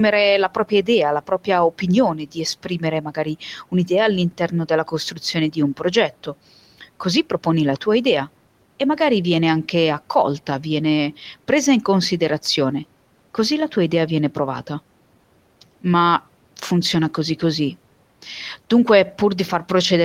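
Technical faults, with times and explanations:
0.49 to 0.88 s, 1.21 to 1.83 s, 2.14 to 3.36 s and 4.31 to 6.34 s, speech cut by the noise suppressor: soft sounds and word endings turn faint and swallowed, dipping by about 10 to 12 dB, because the suppressor mistook them for background noise and turned them down.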